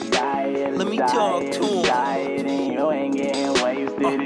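No faults can be heard anywhere in the clip. Nothing in it points to a dropout, a glitch or any other break in the sound.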